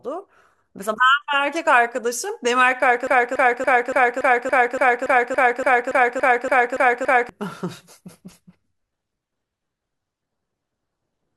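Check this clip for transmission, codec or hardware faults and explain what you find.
Yes, one fault: a broken-record loop. From 3.07 to 7.29 s, a 0.28 s fragment repeats exactly 15 times back to back, likely from a stalled player or stream resending its last fragment, so the real audio there is lost. It sounds stuck; spectrogram and waveform show identical 0.28 s blocks tiled end to end.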